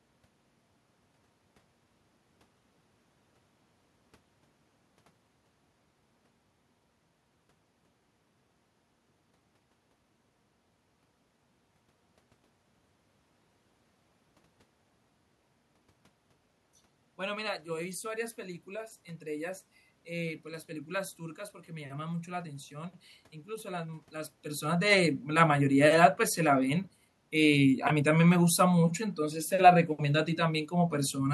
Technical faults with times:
none

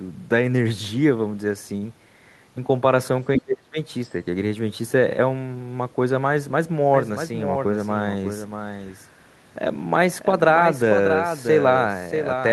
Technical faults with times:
1.77-1.84 short stall from a late packet
3.37-3.41 other side's voice leaking through
3.40-3.78 speech suppressed in double talk
6.94-12.53 doubled audio track

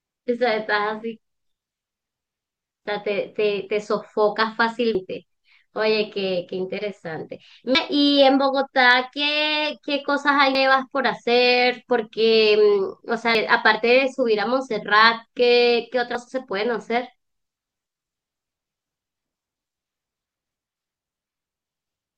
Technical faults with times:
2.15 audio missing between chunks
4.95 audio missing between chunks
7.75 audio missing between chunks
10.55 audio missing between chunks
13.35 audio missing between chunks
16.15 audio missing between chunks

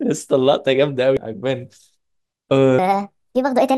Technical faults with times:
1.17 damaged data in a compressed stream
2.79-3.78 section at the wrong speed

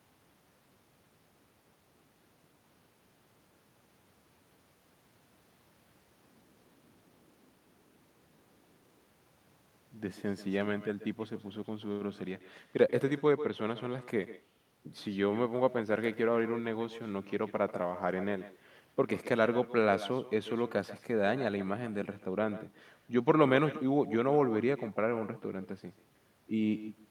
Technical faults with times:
0.00-27.10 echo with no canceller

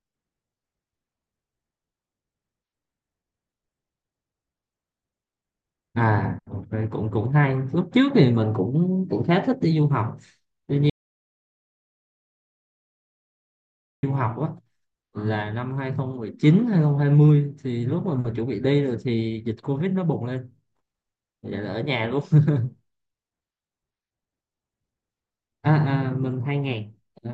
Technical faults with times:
10.90-14.03 audio dropout to silence

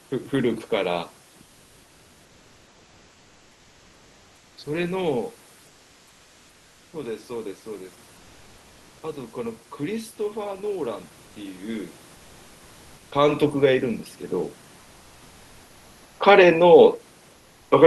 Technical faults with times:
1.43-4.57 comfort noise in place of the background
5.67-6.91 comfort noise in place of the background
8.17-8.99 comfort noise in place of the background

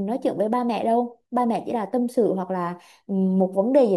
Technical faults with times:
none

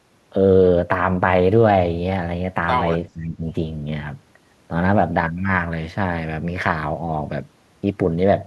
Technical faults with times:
3.12-3.45 speech suppressed in double talk

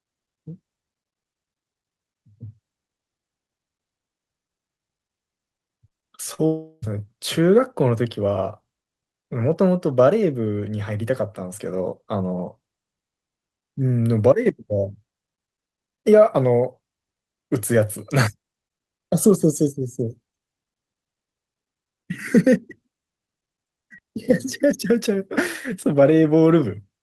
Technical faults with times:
5.87-6.05 short concealed packet loss
6.34-6.41 short concealed packet loss
6.46-6.85 long network dropout

